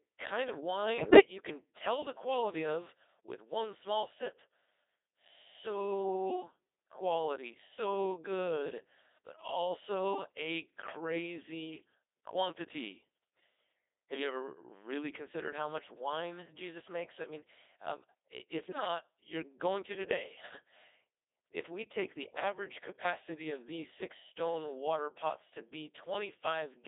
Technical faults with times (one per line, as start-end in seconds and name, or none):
0.00-26.87 Codec 2 vocoder
0.98-1.19 bit errors on digital voice radio
18.63-18.88 bit errors on digital voice radio